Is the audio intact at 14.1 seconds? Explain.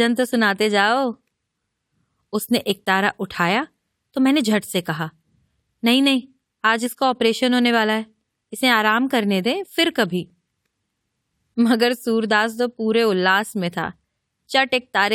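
Yes, the speech at 14.1 seconds is intact, with no fault to be heard at that moment.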